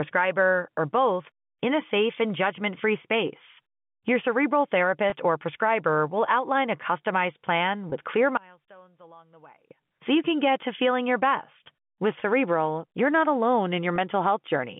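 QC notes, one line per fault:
5.1, 7.9, 12.2 and 13.96 s: packet loss with pitch repetition. Single 20 ms packets dropped; the receiver repeats the last pitch period, giving brief buzzy holds, the first just before "or prescriber will outline", the second just after "outline a customized plan".
8.37 to 9.71 s: one channel inverted. The level drops by about 27 dB, leaving a faint residue until "so you can get", likely from reversed polarity in one stereo channel cancelling when summed to mono.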